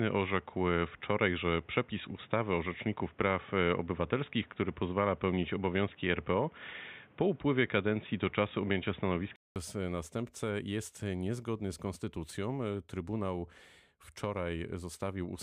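From the start to 9.56 s the speech is band-limited, with nothing above 3.8 kHz, so it sounds dull and boxy, carries background noise roughly 30 dB below the signal, and sits a few decibels off the later level. At 9.56 s a gap of about 200 ms precedes "następcę jest niezgodny z", after which full bandwidth returns. This is likely an input switched to a poorer device, such as a headset's call profile.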